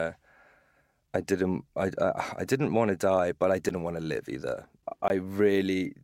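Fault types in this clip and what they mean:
block of digital silence: output drops to silence with no fade, so a 9 ms gap ticks and a 20 ms gap cuts out and back abruptly, unlike a softened dropout.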